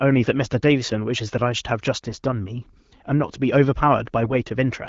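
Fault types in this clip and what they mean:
AMR bit errors: Flipped low-priority bits in the AMR-WB frames misplace excitation pulses and skew pitch, gain and spectral detail. Brief bursts near 2.1 s and 4.24 s turn hoarse and gargly while pitch and level hold, unlike packet loss, which leaves gaps or repeats.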